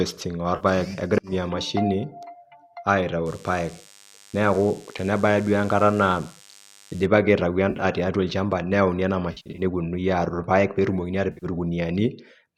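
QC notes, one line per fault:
0.56–0.65 s, 7.70–7.85 s (just before "tiatua olchamba nitayuni ena"), 9.32–9.62 s (just after "tiatua olchamba nitayuni ena") and 11.32–11.46 s, AAC frame loss with concealment: the decoder, likely low-delay AAC-ELD, loses about 50, 80, 190 and 90 ms of audio and patches each gap from the last good spectrum. The result is a smeared, phasey, noisy blur rather than a hard silence or click, which rules out a plain dropout. The later three are broken patches spread over 100 to 260 ms, with no single hole longer than about 70 ms.
3.26–7.06 s, DECT cordless phone buzz: a thin, rasping buzz sits about 25 dB under the speech. It comes from a nearby DECT handset or base whose radio bursts, repeating every 10 ms, are rectified in the audio circuit, so the buzz has a 100 Hz fundamental stacked with many harmonics. That harsh, edgy timbre sets it apart from smoother mains hum.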